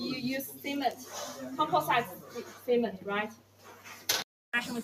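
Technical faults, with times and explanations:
Throughout, noise suppressor applied to music or sounds: a suppressor tuned for speech stays active and mistakes steady tones, ambience and decaying tails for noise. Its gain swings by around 10 dB, so onsets pass while sustained parts sink, leaving the sound pumping and thinned.
2.14–2.68 s and 3.29–4.08 s, sound cut by the noise suppressor: here the suppressor judges the material as noise and pulls it down harder, by about 8 dB and about 9 dB at the deepest. Held sound and tails drop away while sudden sounds still come through.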